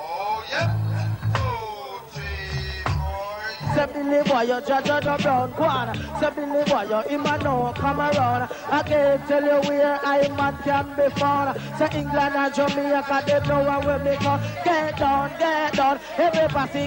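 The audio has two timing faults. At 5.05 to 5.07 s there is a skip ahead: roughly 0.7 s of material is missing and the two sides are butted together with no fill, so the waveform shows an abrupt seam and the spectrogram a sudden vertical break where harmonics and energy don't line up. From 6.25 to 8.43 s comes a jitter buffer speed-up, with playback running at 106% while pitch stays unchanged, which sounds hurried. The receiver was draining an overfull buffer by repeatedly removing short pitch-period pieces, about 0.15 s in total. On a spectrogram the harmonic lines keep their spacing while events are squeezed closer together in time.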